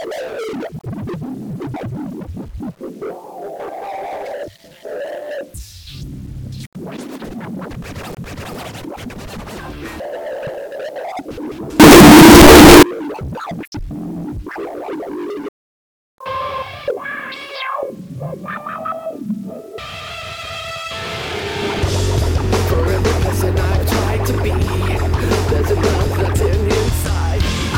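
A likely signed and unsigned mix-up in the 8-bit sample data, with the top bit of each sample flipped, throws every zero crossing across the full range from 11.80 to 12.83 s, where the audio turns into loud, harsh distortion and quiet moments blare as loudly as everything else.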